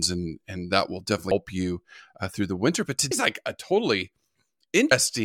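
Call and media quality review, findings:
Audio missing between chunks, three skips: 1.31 s, 3.11 s, 4.91 s. Regular spacing of 1.8 s. First skip falls between "and and that will" and "you uh through the". Second comes just before "like a". Each gap loses roughly a fifth of a second. Edges are butted together with no silence. Likely cause: the capture or processing stage working in 2-second chunks and dropping audio while closing one chunk and opening the next.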